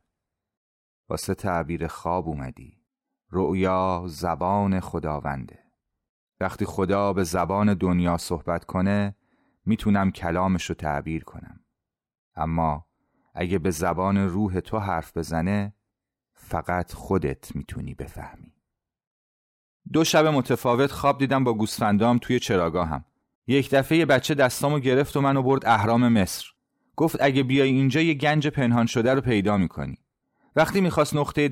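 There are no technical faults to describe in time order.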